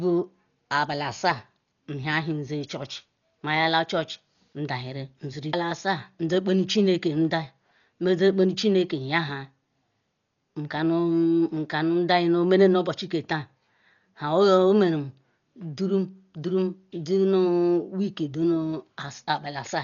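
Likely Dolby Digital compression throughout: the speech is dull, with nothing above 7 kHz and a rough, fluttering noise, as bit-starved frequency lines are filled with dither, fitting about 40 kbps.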